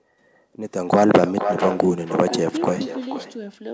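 A speech clip from a call in which the far end played the audio over a loudspeaker and no echo canceller removed the sound its microphone picked back up, so this is echo with no canceller, present throughout. The returning copy arrives roughly half a second behind the original, about 9 dB quieter and thinner, trailing every phrase. The band stops at 8 kHz, which fits a wideband call codec such as G.722.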